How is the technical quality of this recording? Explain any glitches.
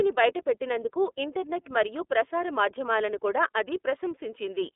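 The recording's technical quality is limited by plainly audible narrowband coding throughout. Across the whole clip the speech sounds thin, slightly rough and synthetic, with nothing above 3.7 kHz and a band of about 300 Hz to 3.6 kHz. The cause is the iLBC codec, which codes each 30 ms frame independently, consistent with 13.33 kbps.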